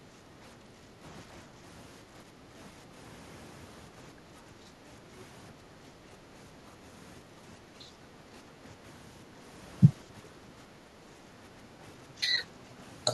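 Speech level dips in four stretches: 0.21 to 2.92 s, 3.9 to 4.83 s, 7.23 to 9.29 s and 10.03 to 12.78 s. In each, the voice drops by up to about 5 dB in patches, totalling roughly one and a half seconds in the first and last stretches and under a second in the others. This is likely speech suppressed in double talk: the echo canceller, unable to separate near speech from loudspeaker echo, turned both down.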